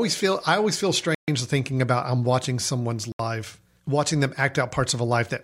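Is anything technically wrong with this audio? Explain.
Yes. The speech cuts to dead silence twice and then carries on: from 1.15 to 1.28 s, about 133 ms, right after "feel I always feel", resuming at "thinking about I'm watching", and again from 3.12 to 3.19 s, about 73 ms, just after "about I'm watching someone's". These gaps are likely a Bluetooth stall. Radio interference delayed packets, the headphones' buffer emptied, and playback went silent until the resent audio arrived.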